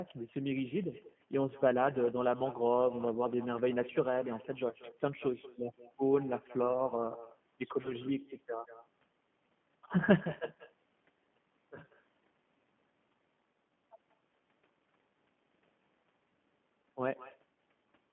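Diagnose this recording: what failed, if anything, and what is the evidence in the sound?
Call processing: echo with no canceller. Every phrase returns roughly a fifth of a second later, about 17 dB down and thinner, so the far end's loudspeaker is leaking into its microphone.

Codec: G.729 at 8 kbit/s. The speech is squeezed into roughly 150 Hz to 3.4 kHz and has that plainly rough, synthetic edge of a low-rate pulse-excited coder.

Network: VoIP packet loss concealed by the speech codec, at 4.69–4.75 s and 7.82–7.95 s. Each is a brief smear where the decoder papered over about 20 ms of missing audio, which fits one lost packet, and the voice stays a bit distorted afterwards.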